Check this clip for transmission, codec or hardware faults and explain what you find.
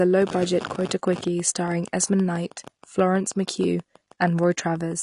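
A codec fault runs through the whole speech clip, from start to finish. The AAC compression damage is plainly audible. Nothing sounds above 10.6 kHz, leaving sibilants dull and fizzy with a warbling smear, likely from coarse AAC-LC quantisation fitting about 32 kbps. A simple low-pass filter wouldn't warble.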